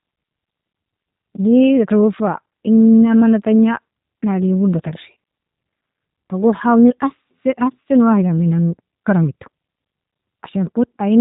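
From start to finish the speech has passed through the G.729 codec. The encoder discards the waveform and sends only a vocal tract filter, a pitch predictor and a sparse set of pulses per short frame, a budget that fits an 8 kbit/s stream. Rebuilt from that model, the voice comes out plainly rough and slightly synthetic, and nothing survives above 3.8 kHz, leaving it muffled and telephone-like.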